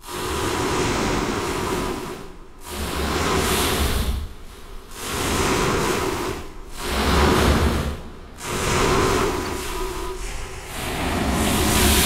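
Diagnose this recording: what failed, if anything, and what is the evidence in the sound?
Periodic USB or driver dropouts at the driver or buffer stage: from 0.19 to 3.41 s, regular ticks recur every 0.248 s, about fifteen in all. Each time, roughly 2 ms of audio is skipped, not silenced, when something blocks the bus. On the waveform this appears as small splice discontinuities, and on the spectrogram as thin, evenly spaced vertical broadband lines.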